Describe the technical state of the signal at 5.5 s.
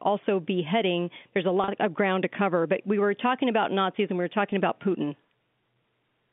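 At 5.5 s the speech is intact, carried cleanly over the G.711 telephone coding with its usual band-limited line sound and no fault audible.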